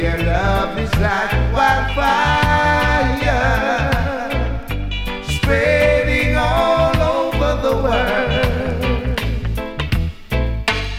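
No technical faults can be heard in this audio; the signal carries through its full length without any audible disturbance to the recording or its playback.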